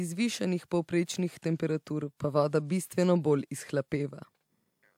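Speech recording with a brief level dip near the end. From 4.11 to 4.22 s, roughly a tenth of a second, the speech falls abruptly by about 6 dB and then returns just as suddenly. The likely cause is one channel dropping out: with one side of the stereo pair briefly lost, the mono sum carries only half of the content common to both channels, giving the sudden 6 dB step down and back up.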